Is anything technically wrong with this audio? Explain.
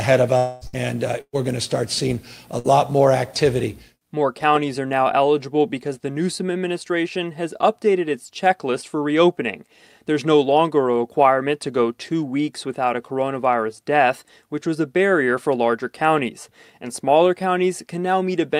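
Yes. The speech has gaps from lost network audio, all packed into the first three seconds.

From 0.37 to 0.64 s there's what sounds like a long network dropout, likely from a stalled stream. About 240 ms of speech never arrives, and the receiver covers the entire hole by stretching the last sound into a fading buzz or hiss. There's no true silence in it, so you hear a smeared, fading sound before the speech picks up again with that chunk missing.

Then there are three bursts of packet loss, at 0.67 to 0.76 s, 1.21 to 1.36 s, and 2.59 to 2.67 s. The first and last each drop about 60 ms and get papered over with a short held, decaying tail. The middle one loses about 120 ms, and the concealment runs out before the audio resumes, leaving roughly 40 ms of silence. Each time the speech jumps ahead.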